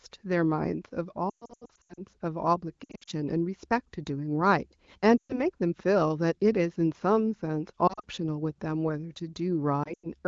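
Brief warbles and smeared, fading dips in the speech at 1.29–2.01 s (worst, runs up to 120 ms), 2.83–3.10 s, 5.18–5.40 s, 7.87–8.04 s and 9.83–10.07 s are lost AMR speech frames. The wideband decoder repeats the last good pitch and vocal-tract settings at falling gain.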